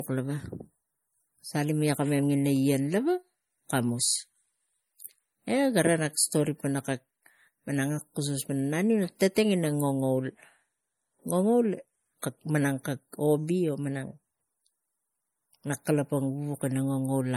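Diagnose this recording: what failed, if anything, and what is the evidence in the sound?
At the codec stage, the speech was most likely compressed at a low bitrate first, around 48 kbit/s MP3, and then re-saved as a high-bitrate MP3 that points to 320 kbit/s. This is low-bitrate audio saved at a high bitrate. The large second file cannot restore detail the first pass discarded, so its coarse quantisation smearing and artefacts persist throughout. The spectrum stops at about 19.7 kHz.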